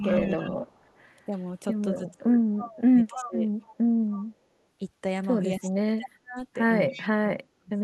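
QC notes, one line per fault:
0.0–0.65 s, 1.26–1.34 s, 1.97–3.46 s and 5.6–7.83 s, speech suppressed in double talk: the talker's level sinks and parts of the sound drop out in pieces. The dips are shallow in the brief second event and deepen to about 35 dB in the final stretch, which is gutted for roughly a second and a half. The likely cause is an echo canceller that, with both sides talking, could not tell the near talker from loudspeaker echo and turned everything down.
0.02–1.0 s, 2.08–4.26 s and 6.89–7.08 s, echo leak: a faint delayed copy of the speech trails it by 274 ms, sitting about 15 to 20 dB under the direct sound and loudest in the middle run. The likely cause is a far end playing the call over a loudspeaker whose echo canceller left some of its microphone pickup unremoved and sent it back.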